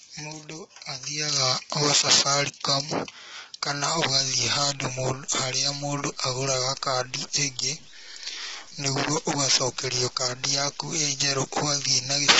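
From the start, the speech sounds rough and grainy, with noise filling the gaps between harmonics. Nothing comes through above 7.8 kHz. This is likely low-delay AAC compression, with heavy damage that fits a bitrate near 16 kbps.

From 3.98 s to the end, a gritty distortion follows the speech. It is worst on quiet passages, which sputter or drop out. This is likely low bit depth without dither, truncated to what sounds like 8 bits, with error roughly 30 dB below the signal.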